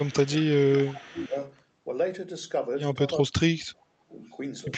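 From 0.0 to 0.53 s and again from 0.69 to 1.4 s there is echo leak: a faint copy of the speech trails it by 380 ms, about 20 then 25 dB down, likely from a far-end loudspeaker whose echo canceller let residue through. On a spectrogram it shows as weak, shifted duplicates of the harmonic bands.

Overlapping that, from 0.05 to 1.36 s, speech suppressed in double talk dips the level in patches totalling roughly 0.7 s, by up to about 15 dB. This is likely the canceller turning down its own talker along with the loudspeaker echo while both sides spoke. The waveform envelope shows notched gaps.

From 3.19 to 4.19 s the same suppression is harsher, with drops of around 35 dB across roughly a second.

A last faint echo, about 40 dB down, appears at 4.27 to 4.34 s.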